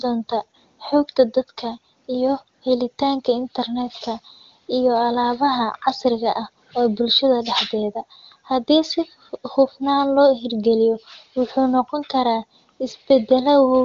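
Nothing stood out on listening to this speech, which comes through the AMR wideband (HD Voice) codec at a high rate with its band ending near 7.5 kHz.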